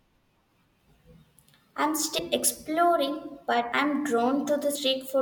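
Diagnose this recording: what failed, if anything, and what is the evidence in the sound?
The codec stage failed. Compressed frames were skipped at 2.17, 3.71 and 4.74 s. The speech jumps ahead each time, by roughly 100, 150 and 70 ms. Each jump fits whole 24 ms frames being lost.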